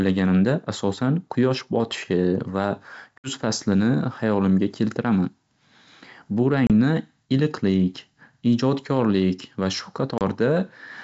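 At 3.19 s the speech drops into a hard-edged hole lasting about 60 ms, roughly several packets. This is packet loss on an ADPCM call. The sound comes back on "faslini hayolimga" with brief, slight distortion. The decoder's predictor and step size had drifted from the sender's, and they take tens of milliseconds to realign. Shorter gaps of about 30 ms, a few packets each, follow at 6.67 s and 10.18 s. Between the gaps, the wideband G.722 coding keeps the speech clear.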